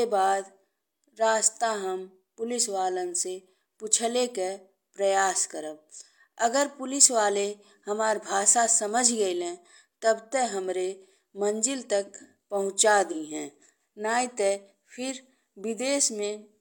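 AAC frame loss with concealment at 13.11–13.16 s, after "हमरे मंजिल तक पहुँचा": a 43 ms gap, fitting one lost frame, is filled from the prior spectrum, leaving a brief smeared patch.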